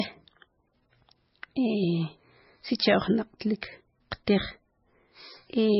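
Throughout, the speech sounds dull, with nothing above 5.5 kHz and two kinds of codec artefacts layered together. This is likely transcoding between lossy codecs: a very low-rate MP3 stage, then Vorbis at around 32 kbit/s re-encoding its damage.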